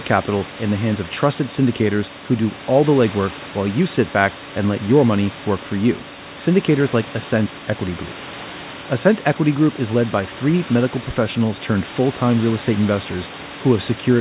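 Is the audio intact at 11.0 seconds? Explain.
Yes, at 11.0 seconds the speech comes through intact, with no dropout, glitch or other fault at that moment.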